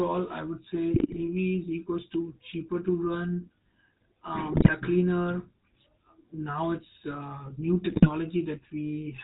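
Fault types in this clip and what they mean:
GSM full-rate codec: The whole clip has passed through the original GSM speech codec at 13 kbps, which models the vocal tract and drives it with a coarse pulse excitation and passes nothing above 4 kHz, so the speech sounds band-limited with a plainly audible buzzy, gravelly roughness.
GSM bit errors: Corrupted bits reached the GSM decoder in three bursts, at 0.94 to 1.24 s, 4.52 to 4.73 s and 7.89 to 8.09 s. Damaged filter, pitch and gain values distort the spectrum and level frame by frame, breaking the speech into squawks and gargling.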